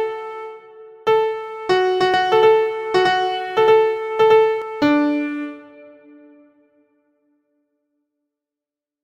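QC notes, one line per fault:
2.14–4.62 s, doubled audio track: likely a slower capture path adds a roughly equal-level copy about 100 ms late, heard as a dry echo that starts and stops abruptly.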